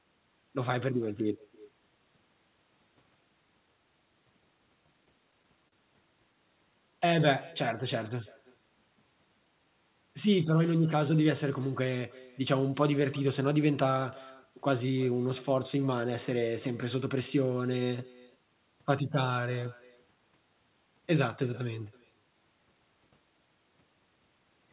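Speech heard over a telephone-band call path, with nothing above 4 kHz, which fits G.711 mu-law coding, and three faults. Throughout there is echo with no canceller: every phrase returns roughly a third of a second later, about 24 dB down and thinner. Unlike room reverberation, it is a distinct delayed copy that has travelled the far end's loudspeaker and microphone and the network, with nothing removing it. From 5.05 to 5.74 s come repeated stalls (stutter). The jitter buffer ran dry five times, and each wait, the longest 40 ms, was filled by stretching the last sound, about 81 ms in all. Nothing is lost, which separates this from packet-loss dropouts, but the speech catches and drags. From 6.91 to 7.26 s a jitter buffer slow-down repeats pitch periods to add 39 ms, so the speech runs at 92% speed at unchanged pitch. That sounds like smooth drawn-out syllables rather than jerky stalls.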